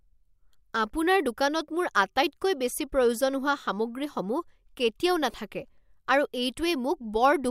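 At 5.31 to 5.34 s, lost LE Audio frames interrupt the Bluetooth stream: about 22.5 ms of audio never arrived, which fits three 7.5 ms LC3 frames. The decoder covered the hole by repeating the last good spectrum with its phases scrambled by random signs, so the speech briefly turns into a hissy, blurred smear rather than falling silent. The gap is short.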